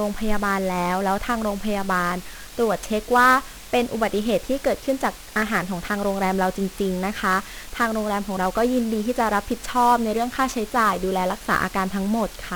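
A steady, even hiss sits under the speech for its whole length, roughly 20 dB below the signal. Because it stays constant and never turns into gritty distortion, it points to low bit depth with dither. The audio seems to have been reduced to very few levels, which fits about 7 bits per sample. Dither noise was added before rounding, so the coarse rounding error became flat broadband noise instead of harsh harmonics. Over that hiss, the whole clip sounds fuzzy and crackly, and the upper frequencies are buried in noise. That heavy, grainy damage is typical of 1-bit DFPWM compression, here at a rate that fits a 48 kbps stream. DFPWM stores just one bit per sample, nudging an adaptive level up or down, so it cannot follow the waveform closely. The resulting quantisation noise is strong and spread across the band, and it swamps the treble throughout.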